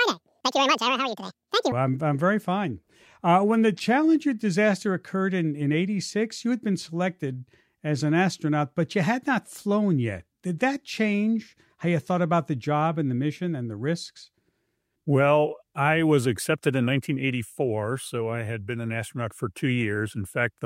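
From the start to 1.72 s, the audio is read two samples at a time, so it plays at double speed. The reader treats each pair of samples as a single frame. That fits a wrong assumption of two channels or of samples twice as wide. The sound runs twice as fast and sits a full octave higher, 12 semitones up.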